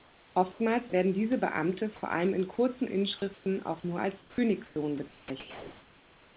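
From 0.0 to 0.6 s, ahead of "werden diese", the real room background gives way to comfort noise in place of the background, likely from discontinuous transmission in the call. The same steady, featureless hiss returns from 3.34 to 3.46 s between "vor allem in kurzen" and "auch nur" (about 4 dB quieter), at 4.66 to 4.76 s (about 1 dB lower), and from 5.08 s to the end. On a spectrogram these stretches look like smooth, uniform noise bands capped at 4 kHz by the G.711 path, without the fine texture of the room.

Sound dropped by the voice detector occurs at 0.9 s, just before "werden diese", at 4.2 to 4.38 s, and at 5.08 to 5.3 s. The detector likely mistook quiet sound for background and stopped sending, so about 20 ms, 80 ms and 80 ms of sound are replaced by steady noise. In the waveform the envelope flattens abruptly at those points.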